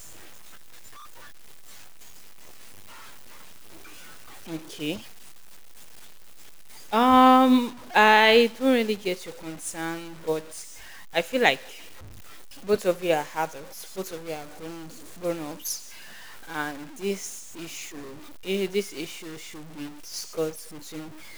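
From start to finish the speech carries a harsh, buzzy grit, and the pauses are filled with a noise floor sitting around -40 dB instead of going quiet. That points to a stuck bit, likely a single data line held fixed, so about half the samples are offset by one step. Unlike clipping, the distortion doesn't track loudness, and unlike hiss, the noise in the silences is rough and signal-shaped.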